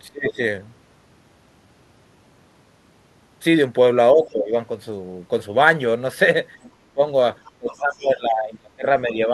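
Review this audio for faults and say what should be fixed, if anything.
The speech gets pulled down in five places: 0.08 to 0.42 s, 4.14 to 4.53 s, 6.81 to 7.00 s, 7.58 to 8.86 s, and 9.04 to 9.31 s. The drops run from a slight dip near the end to roughly 25 to 30 dB at the worst, and the long one around 8 s goes on for about a second. That's speech suppressed in double talk. The likely cause is an echo canceller that couldn't separate the talker from the far-end signal while both were active, so it turned everything down. The fix is to tune the canceller's double-talk detection so it keeps the near-end talker through overlaps instead of gating them.

There are also two short scraps of the other side's voice leaking through, at 6.63 to 6.70 s and 7.46 to 7.51 s. They're faint, roughly 30 dB under the speech, and come in brief bits just before and between the suppressed stretches. This is likely far-end loudspeaker sound reaching the mic and getting past the echo canceller unremoved. 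The fix is to give the canceller a longer or better-converged filter, or lower the playback level, so less of the far end reaches the mic.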